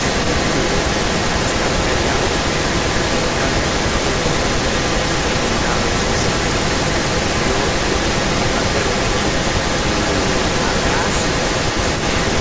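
From 0.0 to 12.4 s, echo leak: an echo canceller likely passed loudspeaker pickup back, so the speech repeats 247 ms later, roughly as loud as the original.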